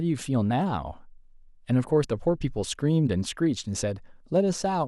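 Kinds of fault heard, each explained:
No technical faults can be heard in this speech.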